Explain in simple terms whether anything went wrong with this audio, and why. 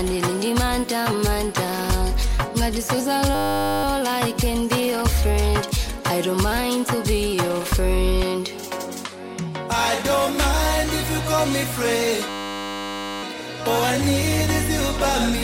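A system hang loop occurs at 3.35 to 3.84 s and again at 12.29 to 13.23 s. The computer briefly froze while the sound hardware kept replaying the same 10 ms scrap of audio, producing a steady 100 Hz buzz until playback resumed with almost nothing missing.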